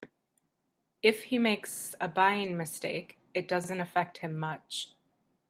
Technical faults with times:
1.72-1.88 repeated buffer
2.43-2.45 lost packet rebuilt from error correction
3.64-3.68 repeated buffer

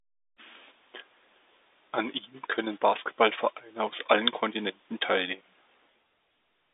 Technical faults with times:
none

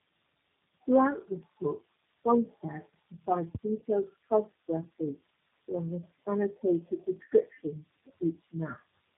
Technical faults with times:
0.00-9.18 tandem speech coding

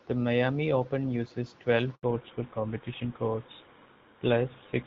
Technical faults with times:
1.95-2.03 handover gap
2.03-4.87 fallback to narrowband

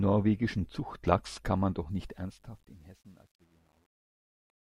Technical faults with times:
1.90-4.75 truncation distortion on a fade

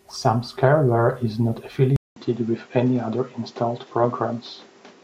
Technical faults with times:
1.96-5.04 input switched to a poorer device
4.01-4.11 DAB burbling

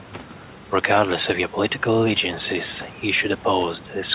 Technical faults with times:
none

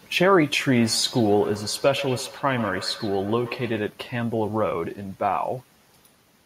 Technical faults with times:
0.77-3.87 feedback echo between two devices

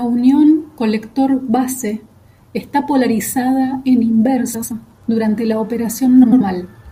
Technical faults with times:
4.54-4.72 frames out of order
6.23-6.41 frames out of order

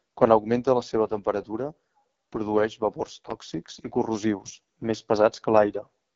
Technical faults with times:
0.00-6.15 AMR wideband (HD Voice) codec

